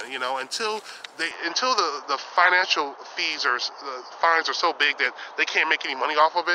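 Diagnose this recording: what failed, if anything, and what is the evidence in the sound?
At 1.31 s the sound abruptly goes dull and narrower, with nothing above 6.4 kHz from there to the end, a level shift of around 5 dB and a new, faint noise floor, with no gap at the switch. That's likely an input switched to a poorer device at the driver level.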